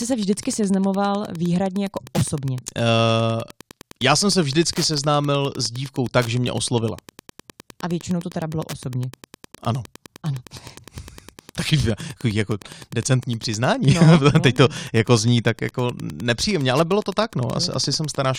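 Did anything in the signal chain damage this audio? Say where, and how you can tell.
Yes. A Wi-Fi radio sitting close to the analogue wiring or input stage is getting its RF into the circuit, where it is rectified into audio-band clicks. This is Wi-Fi interference, and it runs through the whole speech clip as a steady, buzzy tick repeating every 102.4 ms, just under ten times a second. That spacing matches a Wi-Fi beacon interval exactly. It sits roughly 25 dB below the speech, so it is clearest in pauses.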